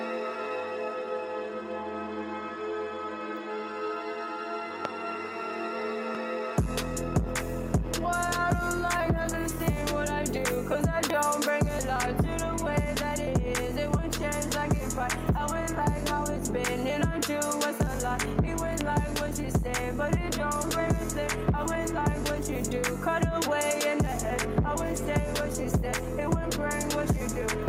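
A loud pop lands at 4.85 to 4.87 s, a double pop at 11.04 to 11.12 s, and another single pop at 18.81 to 18.83 s, each peaking roughly 10 dB above the surrounding sound. These are likely voltage pulses from a plug, switch or static, shaped into a short thump. Unlike a dropout or an edit click, nothing is removed: the sound runs on unbroken beneath each pop.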